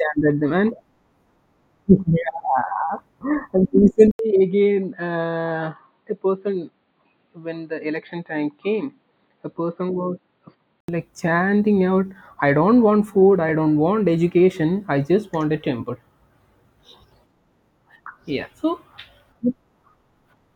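At 4.11 s, after an 80 ms gap, the speech turns dull and slightly quieter, capped near 4.6 kHz, with faint new background noise. The input likely switched to a poorer device. Full clarity returns at 10.88 s.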